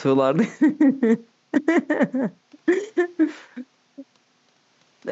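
There are no technical faults in this speech clip; the only background is room noise sitting about 43 dB below the speech.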